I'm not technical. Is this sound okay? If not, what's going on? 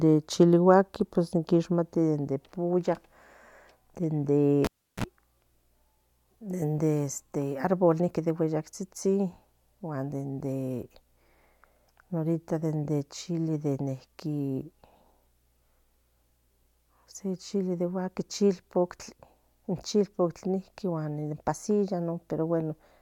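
No. At 4.65 seconds a cable carrying the sound was pulled out and plugged back in. This is a cable pulled and plugged in fault. You hear a pop, then the speech drops to near silence for about a third of a second. Just before it returns there is a short buzz, about 40 milliseconds, as the plug's tip touches first and picks up hum from the mains power. A second pop at 5.04 seconds marks the speech coming back.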